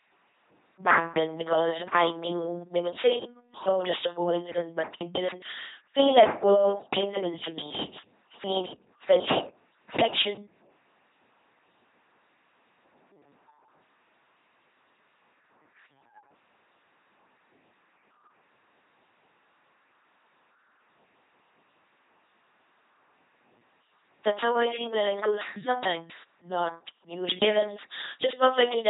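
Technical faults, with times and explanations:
throughout, LPC-10 vocoder: the speech is rebuilt from a ten-pole vocal tract filter fed by a pulse train or noise, each moment forced wholly voiced or unvoiced. This gives a heavily damaged, buzzing robotic voice with nothing above 3.9 kHz, fitting a 2.4 kbit/s coder.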